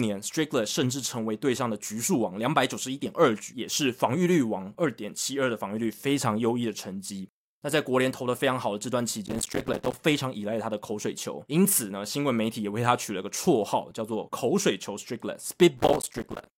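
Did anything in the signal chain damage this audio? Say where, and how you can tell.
Yes: processor overload crackle at 9.26–9.93 s and 15.78–16.47 s, a driver/buffer-stage fault where repeated missed deadlines on roughly 5 ms buffers leave silent gaps heard as gritty crackle.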